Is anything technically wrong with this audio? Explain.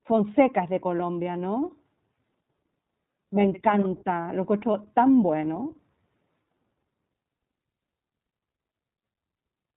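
Yes. iLBC codec damage runs throughout the speech: each 20 ms frame's excitation is coded on its own, which fits iLBC's 15.2 kbps mode, and nothing above 4 kHz passes, so the voice sounds dull, slightly rough and plainly synthetic.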